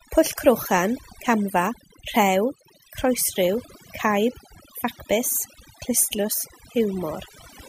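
Throughout, the background drops to near silence flecked with twinkling specks while quiet parts of the voice are cut away with it: overdone noise removal, cutting bands that sit near the estimated noise floor.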